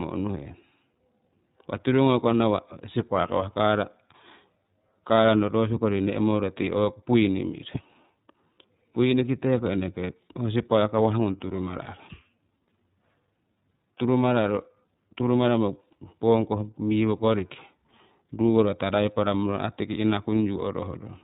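From start to finish the speech carries iLBC codec damage, and it is plainly audible. Everything above 4 kHz is gone, so the voice sounds narrowband, with a slightly rough, synthetic edge. Each frame, 30 ms here, is coded independently of the previous one, and the bitrate points to about 13.33 kbps. On a spectrogram the energy stops at a hard ceiling at 4 kHz.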